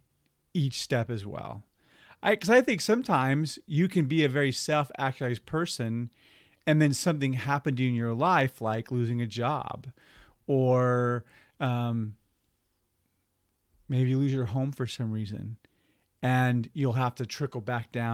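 Clock drift between sender and receiver runs through the whole of this speech clip: the sending device's clock runs about 2% slow relative to the receiver's. Because audio arrives slightly more slowly than it is played out, the jitter buffer keeps draining, and the receiver has to keep stretching the stream to avoid running dry. Repeated timing corrections from 0.08 s to 18.09 s are the result. Short pieces are repeated again and again, all in the same direction and at uneven intervals, so playback runs at about 98% speed and gains roughly 0.4 s overall. Each repeat is tiny, so it comes across as faint hiccups and a slightly dragging, uneven pace rather than distinct glitches.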